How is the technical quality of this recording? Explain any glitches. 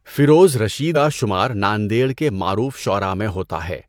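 One glitch affects this speech recording. At about 0.92 to 0.97 s, just before "شمار ناندیڑ کے", compressed frames are skipped. Roughly 150 ms of audio never plays, so the speech jumps ahead abruptly at the join.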